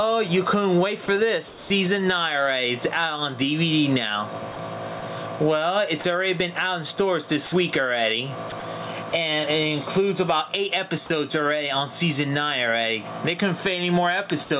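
Gain pumping runs through the whole clip, a swing of around 10 dB. This is likely a microphone gain set far too high, with a fast limiter or compressor pulling the level down on each peak and releasing it in the gaps, so loud and soft passages sit squashed close together.

Sound chopped by the voice detector appears from 1.06 to 1.7 s, where about 240 ms is replaced by synthetic hiss, and again from 4.52 to 5.02 s, with about 60 ms replaced. The sender's detector likely flipped between sending and muting within each stretch, so quiet edges give way to generated comfort noise.

Sound dropped by the voice detector follows at 6.02 to 6.04 s, about 20 ms lost, and at 7.46 to 7.52 s, about 60 ms lost. Each time the detector likely mistook quiet sound for background and stopped sending, and a steady fill of comfort noise takes its place until transmission resumes.

Sound chopped by the voice detector returns from 8.5 to 9.12 s, with about 60 ms swapped for comfort noise, giving the same choppy texture.

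Sound dropped by the voice detector occurs once more at 14.44 to 14.5 s, where about 40 ms of sound is lost under a brief noise fill. All of these fills sound the way a detector feeding standard comfort noise would, and the band stops at 4 kHz throughout, which fits a G.711 call codec.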